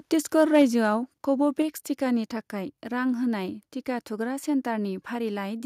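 The input level was likely set too high at the microphone, so from 0.38 to 0.62 s the speech overran the converter's ceiling by about 3 dB. This is microphone overload. Around one sample in twenty is flattened at the converter's limit, so the peaks are cut off square and the loudest syllables in that stretch take on a harsh, crackly edge.

The call software then likely reacted to that overload by stepping down the microphone volume. At 0.62 s, right as the clipped passage ends, the input gain drops by about 2 dB in a single step. Speech and background fall together, which is why the change sounds like a sudden level cut rather than a fade. A second step of about 3 dB follows at 1.62 s, just before "टिकानि थाखाय रां होनाय", leaving everything after it audibly quieter again.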